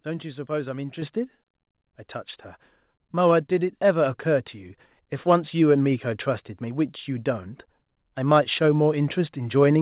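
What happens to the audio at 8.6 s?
At 8.64 s the microphone volume steps up: the call software judged the input too quiet and raised the device gain by about 1 dB in a single jump. Speech and background noise become slightly louder together, within the 4 kHz band of the call path.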